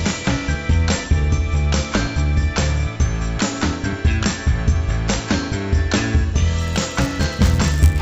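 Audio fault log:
6.59 to 8.01 s, resampler restarted on every block: A buzz at 100 Hz sits on the sound to the end. Each 10 ms block was converted on its own, and the converter was reset at every boundary. At each edge it lacked the real neighbouring samples, so it left a small error. The errors repeat 100 times a second and fuse into a buzz. They arise only where signal is present. The rate change fits an upsampling from 16 kHz to 48 kHz.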